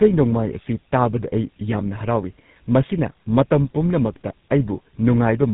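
Throughout the speech, the sound is rough, muffled and warbly, with nothing above about 3.8 kHz. That combination points to tandem speech coding: the call appears to have passed through GSM full rate coding, then an A-law telephone link, then GSM full rate again. The second GSM coder had to model audio already smeared by the first, so its errors stacked on top, leaving the speech coarser and more watery than a single pass would.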